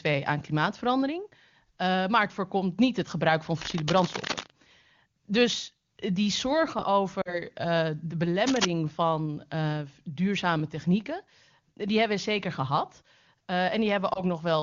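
From 3.61 to 4.50 s, cable scratch noise adds rough rustling a little below the speech level, likely from a worn connector's contact resistance fluctuating. At 7.21 to 7.41 s, lost AMR speech frames leave a drop to near silence, consistent with about 40 ms of missing frames concealed by the decoder. Cable scratch noise returns from 8.37 to 8.65 s, roughly as loud as the speech. At 14.13 to 14.22 s, a shorter dip fits a single lost 20 ms frame.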